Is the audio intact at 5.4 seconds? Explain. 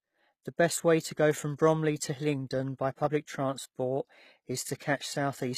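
No. At 5.4 s, as across the whole clip, the speech carries HE-AAC compression damage, likely from low-bitrate encoding, with a sound that fits roughly 20 kbps. Only the lower spectrum is coded directly; the treble is synthesised by copying lower bands upward under a coarse envelope, so its harmonics don't align with the real ones. The result is plainly audible: s sounds turn gritty and lispy, and nothing survives above 14.9 kHz.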